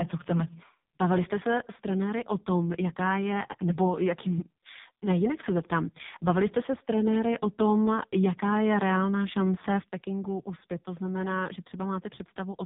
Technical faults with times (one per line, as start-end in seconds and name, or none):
0.00-12.65 AMR narrowband mobile codec